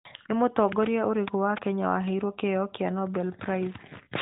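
Nothing is technically wrong with this speech recording.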